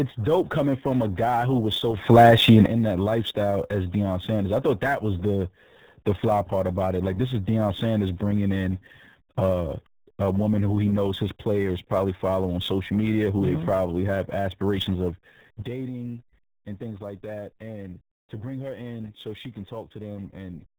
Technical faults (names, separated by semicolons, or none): RealAudio 14.4 codec; sample clock jitter; sudden gain jump